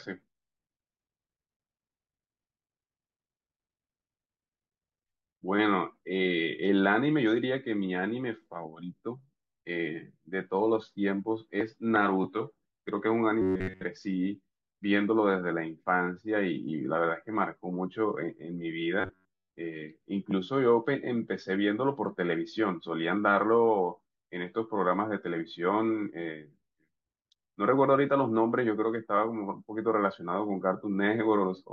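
Robotic sound from repeated short buffers appears in this speech clip from 13.42 to 13.84 s and again from 19.01 to 19.49 s. In both stretches the voice collapses into a rigid, metallic buzz pitched at 93.8 Hz, which fits a chunk of roughly 10.7 ms being replayed over and over. The likely cause is new audio arriving too seldom, so the software repeats its last short buffer while most of the real sound is skipped.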